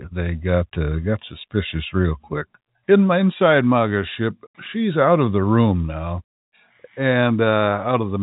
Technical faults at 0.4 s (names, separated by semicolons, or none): none